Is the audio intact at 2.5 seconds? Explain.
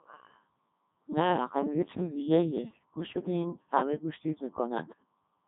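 No, the Codec 2 vocoder affects the whole clip, 2.5 s included: the speech is resynthesised from sine waves, consistent with its 3.2 kbit/s mode, sounding robotic and buzzy, with nothing above 3.8 kHz.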